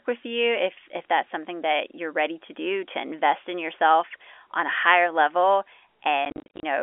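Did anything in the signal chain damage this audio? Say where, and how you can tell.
Yes, at the network stage. Near the end, from 6.25 to 6.63 s, the speech breaks up with packet loss filled with silence. About 220 ms of sound drops out across that 380 ms stretch, in short gaps no longer than 40 ms each. Every gap starts and stops abruptly. The gap lengths point to lost 10 ms packets that the receiver replaced with silence. The narrow 300 Hz to 3.4 kHz telephone band of the G.711 line is audible throughout.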